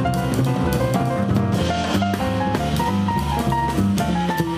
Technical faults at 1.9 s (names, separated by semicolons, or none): none